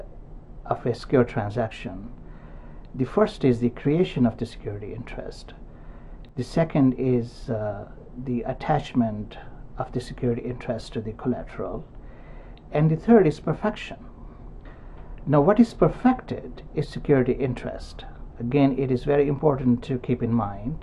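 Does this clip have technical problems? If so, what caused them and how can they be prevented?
Yes. From 6.29 to 6.38 s the sound abruptly dips by about 6 dB for roughly a tenth of a second, then snaps back to full level. The likely cause is one channel dropping out: with one side of the stereo pair briefly lost, the mono sum keeps only half of what both channels shared, so the level halves and anything unique to the missing side vanishes. Secure connectors and cables and monitor each channel's meter during recording to prevent it.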